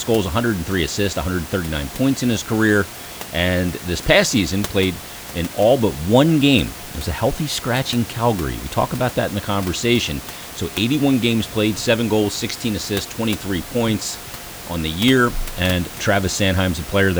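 Speech recording with no technical faults, the only background being room noise about 15 dB below the speech.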